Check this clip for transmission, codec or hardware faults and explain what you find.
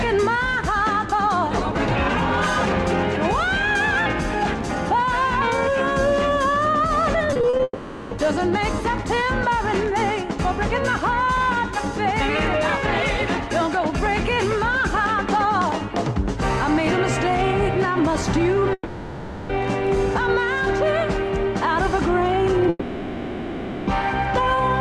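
Yes, there are network faults: one burst of repeated packet loss that runs straight into the first of three long dropouts.

Repeated packet loss (robotic sound) occurs from 7.33 to 7.61 s. The audio breaks into about five short holes, the longest 40 ms, each patched by stretching the preceding sound. Nearly half of that span is filled-in material, so it turns choppy. Unlike a dropout, the real audio keeps returning between holes.

Long network dropouts occur at 7.63 to 8.13 s, 18.73 to 19.51 s and 22.69 to 23.89 s, and are likely caused by the stream stopping entirely. The last sound is extended as a fading buzz or hiss for roughly 0.48 s, 0.76 s and 1.18 s respectively, followed by a brief moment of near silence before the audio resumes with that stretch gone. The single unbroken hole distinguishes these from the choppy burst.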